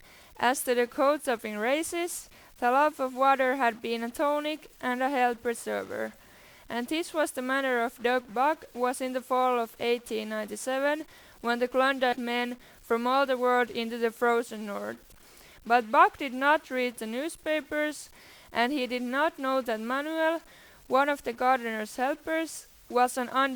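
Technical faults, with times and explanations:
throughout, stuck bit: a distortion sits on the speech, and the pauses fill with noise instead of falling quiet. One data bit is likely held at a fixed value, so about half the samples are shifted by that bit's weight and quiet passages flip around zero.
12.12 to 12.16 s, stream segment skipped: the speech lurches forward with a small blip, as if part of the programme was cut out. A segment of the stream likely failed to load, and playback carried straight on with the next one.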